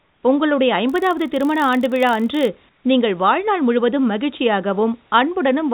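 From 0 to 0.23 s the sender has likely stopped transmitting during a pause, and the receiver fills the gap with comfort noise in place of the background. The room noise, which sits about 41 dB below the loud speech, is replaced by a flat, featureless hiss about 5 dB quieter. Its texture changes audibly when the real signal returns.

Between 0.87 and 2.48 s, just before "நீங்கள் வாழ்நாள் முழுவதும்", there is a block size mismatch (padded). A writing stage delivers less than each 1024-sample block the next stage reads, and the remainder of each block is zero-filled. This cuts a tiny silent gap into every block, producing a rough buzz at 46.9 Hz, which fits 1024-sample blocks at 48 kHz. The slowdown is only 0.999 times normal speed, so the timing and pitch barely shift.

The same substitution returns from 2.69 to 2.84 s, right before "நீங்கள் வாழ்நாள் முழுவதும்". For 150 ms the background becomes smooth synthetic noise about 4 dB below its true level. 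Through the G.711 call path, nothing is heard above 4 kHz.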